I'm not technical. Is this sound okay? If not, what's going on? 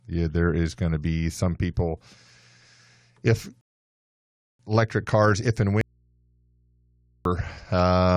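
No, there are two separate problems in this speech.

The first is a rebuffering stall at 3.61 s. The player ran short of downloaded audio, so the speech simply stops and the line goes silent until 4.59 s. It then picks up exactly where it left off. No speech is missing; the stall just inserts about 0.98 s of dead air into the recording, the same way a video freezes while it loads.

The second is an audio dropout to a faint residue, from 5.81 s to 7.25 s. The speech cuts out abruptly, and about 1.44 s of it is lost rather than delayed. During that gap you can still hear a low mains hum, so the equipment further down the chain kept running. The likely cause is that the signal feeding it was broken for that moment, leaving an open input that picks up electrical hum.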